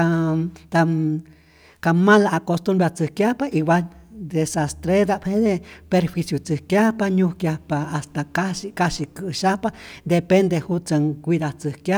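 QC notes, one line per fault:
No technical faults can be heard anywhere in this speech recording.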